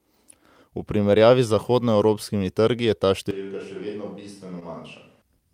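A switch to a distant microphone runs from 3.31 to 5.22 s, just after "trgi je ta". The sound turns hollow and roomy, about 10 dB quieter, with room noise roughly 30 dB below it, likely because the close microphone dropped out.

Short concealed packet loss occurs at 4.59 to 4.63 s. About 20 ms of audio never arrived, and the receiver bridged the hole by extending the preceding sound, leaving a brief smear.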